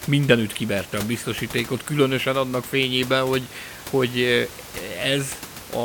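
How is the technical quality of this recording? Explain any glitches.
No technical faults turn up anywhere in this speech recording, and the only thing under the talker is the room noise picked up by the microphone itself, sitting about 16 dB below the speech.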